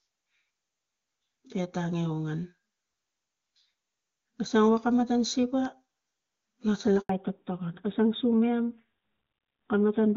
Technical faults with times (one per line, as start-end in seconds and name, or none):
7.01-7.09 handover gap
7.09-10.17 fallback to narrowband